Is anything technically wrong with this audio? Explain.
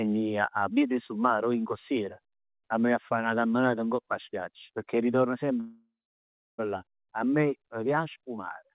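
Yes. From 5.6 to 6.6 s there is a call audio freeze, likely because packets stalled in transit until the jitter buffer ran dry. The receiver stretches the last sound into a fading buzz, then about 0.66 s of silence. The speech then resumes exactly where it stopped, with nothing lost but now running about a second late. All of this arrives through a G.711 mu-law call path that leaves nothing above 4 kHz.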